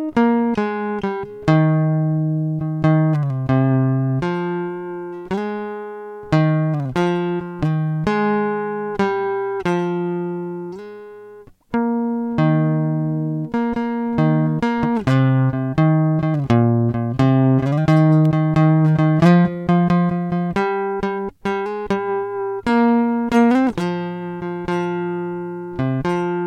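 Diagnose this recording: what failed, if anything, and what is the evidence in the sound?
A single sharp snap lands on top of the music at 18.25 s, lasting only a few milliseconds and peaking at a moderate level, well below full scale. It has the look of an electrical switching spike, picked up in the analogue wiring: a nearby switch, motor or static discharge likely arced once, and the cabling coupled that brief burst of energy into the signal path, where it was recorded as an added click.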